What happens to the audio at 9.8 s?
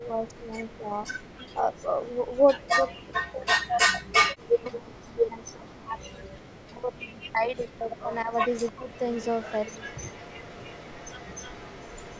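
At 9.8 s you're inside an echo leak that runs from 8.9 s to the end of the clip: a faint copy of the speech trails it by about 0.30 s, sitting roughly 20 dB down. It's likely a far-end loudspeaker feeding its microphone, with the echo canceller not fully removing it.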